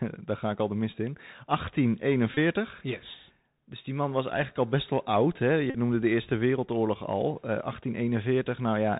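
From start to finish the speech carries the Bluetooth CVSD headset codec. The damage is plainly audible, and it fits a 64 kbps CVSD link. CVSD sends one bit per sample, saying only up or down, with an adapting step size. Nothing above 4 kHz survives, so the speech sounds narrow and boxy. Sibilants turn scratchy. Loud bright sounds outrun the step and distort. A fine granular hiss sits underneath.

At 2.34 s comes a Bluetooth headset packet repeat, lasting to 2.38 s. Voice packets went missing and the chip decoded the last good packet again and again. About 26 ms was lost, which fits a run of about seven packets. Each repeat lasts 3.75 ms, so the run becomes a short buzz near 267 Hz. At 5.70 s a longer run follows, ending at 5.77 s, just before "noemde de". Here 45 ms was lost, which points to about twelve packets. The same buzz lasts longer.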